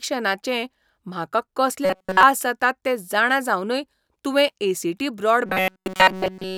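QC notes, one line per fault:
1.85–2.23 s and 5.46 s to the end: robotic sound from repeated short buffers. Both stretches turn into a rigid, metallic buzz pitched at 188 Hz that only roughly tracks the speech. A period of about 5.3 ms fits a roughly 5 ms buffer being replayed over and over, likely because fresh audio arrived too late, while the real signal was skipped. On a spectrogram this appears as evenly spaced harmonics of 188 Hz. The waveform shows one short cycle repeating identically.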